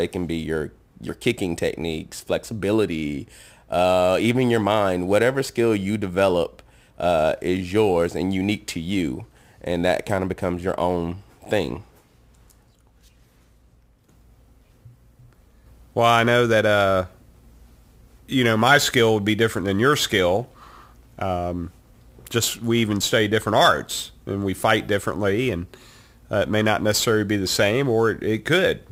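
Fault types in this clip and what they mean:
Crude rate conversion: throughout, speech resampled by nearest-sample picking, likely 44.1 to 48 kHz unfiltered, leaving an inharmonic gritty fizz about 25 dB below the sound on loud, bright syllables.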